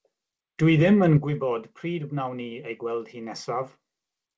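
A speech recording, band-limited with nothing above 8 kHz, consistent with a G.722 call path at 64 kbps. At 1.17 s the level drops abruptly by about 6 dB and stays there to the end, most likely because one channel drops out and the remaining channel is summed to mono. Unlike a gain fade or limiter action, there is no ramp or recovery, just a single step of almost exactly half the amplitude.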